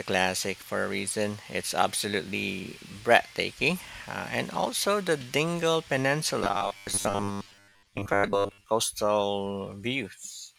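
From 6.44 to 8.64 s the speech turns into robotic sound from repeated short buffers. It becomes a rigid, metallic buzz near 100 Hz that only loosely tracks the speech. The likely cause is audio arriving too seldom, so the software loops the last 10 ms slice, about 10 ms per cycle, and skips most of the real signal, roughly two thirds or more. A spectrogram shows flat, evenly spaced harmonics of 100 Hz, and the waveform shows identical repeating cycles.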